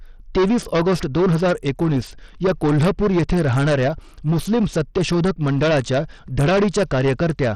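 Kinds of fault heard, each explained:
Hard clipping: A stage in the chain was driven about 14 dB beyond the level it could pass, so every peak in the speech was sliced flat at the ceiling. Roughly a sixth of the waveform sits pinned against that limit, and the squared-off tops throw harmonics high into the spectrum. The result is a harsh, buzzing fuzz that coats each louder syllable across the whole clip rather than just an occasional crackle on the strongest peaks.
Bluetooth SBC compression: The speech was likely passed through the basic Bluetooth SBC codec with a lean bit budget, one that points to a rate in the region of 80 kbps. With so few bits, the weaker upper bands are starved and the rest are quantised coarsely. Throughout the clip the treble thins out and flickers unsteadily, while a gritty, grainy noise with aliasing rides on top of the speech, plainly audible.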